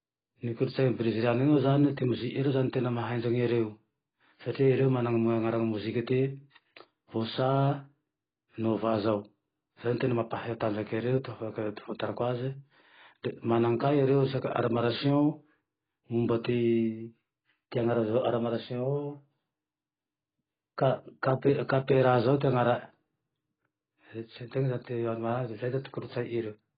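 Speech, dull and band-limited throughout, with nothing above 4.8 kHz. Sibilants sound fizzy and smeared. This is likely heavy AAC compression, consistent with a very low bitrate around 16 kbps.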